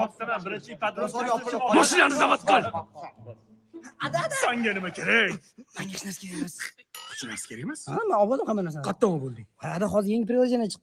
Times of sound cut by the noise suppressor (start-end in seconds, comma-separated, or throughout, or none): 0.60-0.77, 2.83-3.99, 5.47-5.71